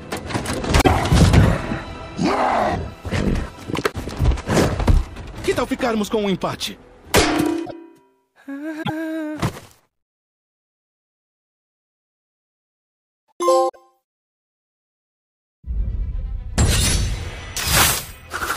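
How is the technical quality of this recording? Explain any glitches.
The recording has five brief glitches, all of the same kind: broken MP3 bit reservoir, at 0.80–0.88 s, 3.91–3.95 s, 7.64–7.72 s, 8.82–8.90 s and 13.68–13.76 s. Each is a short garbled disruption where the audio jumps ahead. Most last about 80 ms, roughly three 26.1 ms frames, and the one at 3.91 s lasts about 40 ms. The likely cause is dropped MP3 frames. Because frames borrow bits from earlier ones, the frames after each gap decode using the wrong data until the stream recovers.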